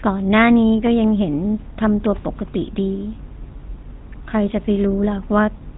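From start to finish the speech carries the sound of the GSM full-rate codec, the original mobile phone codec. Nothing above about 3.8 kHz gets through, so the sound is narrowband and dull. The codec rebuilds each voice from a vocal-tract filter driven by a sparse, evenly spaced pulse train, and at a rate that fits 13 kbps that coarse excitation gives a plainly audible buzzy, gravelly roughness across the whole clip.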